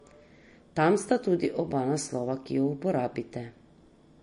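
From start to finish the speech carries a watery, swirling quality, which points to MP3 compression, likely at a low bitrate around 40 kbps. Attacks smear. The encoder, short of bits, drops weak frequency lines that flicker in and out between frames, giving metallic chirps. A spectrogram would show scattered, blotchy holes in the upper bands.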